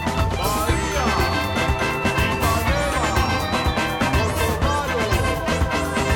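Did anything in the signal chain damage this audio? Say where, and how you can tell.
Yes, two sharp clicks in the music at 0.39 s and 1.91 s, likely dropped samples in the driver or buffer stage, each losing a fraction of a millisecond and jumping the waveform.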